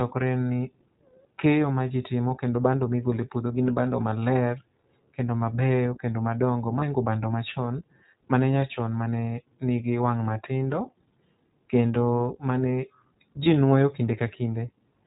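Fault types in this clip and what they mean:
iLBC codec: The speech sounds dull and boxed-in, with nothing above 4 kHz, and carries a plainly audible rough, slightly synthetic edge throughout. This is the narrowband iLBC VoIP codec, which rebuilds each frame's excitation on its own rather than predicting it from the previous frame. Its cost shows as grain in the speech, and the character fits its 15.2 kbps mode with 20 ms frames.
lost iLBC frames: Twice the speech briefly smears into a short held, faintly buzzy sound and then snaps back clean. The first is at about 6.8 s, between "kendo mabeyo kendo madongo" and "bando machon mane nyachon", and the second is at about 13.44 s. Each sounds like one missing 20 ms frame. The decoder covered it by repeating the last pitch cycle with added noise, and because iLBC frames stand alone, recovery is immediate.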